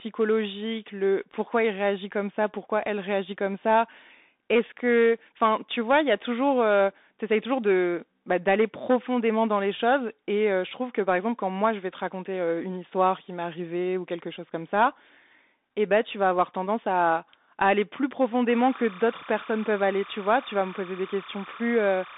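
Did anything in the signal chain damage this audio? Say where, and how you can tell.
Yes. Bluetooth CVSD headset codec damage runs through the whole speech clip. The band stops at 3.8 kHz, with the line limited to about 250 Hz to 3.7 kHz. Loud high-frequency speech distorts, s sounds turn scratchy, and a granular hiss sits underneath, all plainly audible. This is the codec stage: one-bit delta modulation tracks the waveform with an adapting step that fast content outruns, which fits a 64 kbps CVSD link.

Timecode bleed appears from 18.49 s to the end at 22.17 s as a steady chirping warble, roughly 20 dB below the speech, flipping between tones near 1 kHz and 2 kHz. It points to the analogue wiring stage, where linear timecode on an adjacent track or cable has coupled into the audio path. Its square-wave switching between the two frequencies is consistent with 29.97 fps code.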